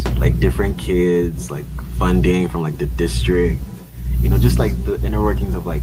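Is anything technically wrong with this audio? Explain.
Yes. Throughout the speech, there's echo with no canceller: the far end's loudspeaker feeds its microphone, returning each phrase as a distinct, thinner copy about 14 dB down, roughly a fifth of a second late, unlike room reverb's smooth tail.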